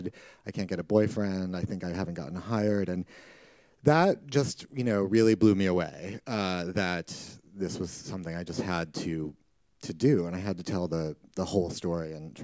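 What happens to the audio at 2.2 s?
Nothing goes wrong at 2.2 s; the audio plays through that moment intact, with no dropout, click or other fault.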